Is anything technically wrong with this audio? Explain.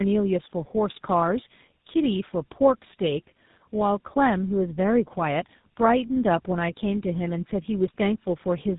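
Yes. Tandem speech coding runs through the whole clip: the speech has passed through two low-rate speech coders in a row, consistent with a G.729-type coder followed by a GSM full-rate coder, with a plain telephone-grade link between them. Each coder models only the previous coder's damaged output, so their errors stack. The result is rough, muffled, warbling speech, with nothing audible above about 3.8 kHz.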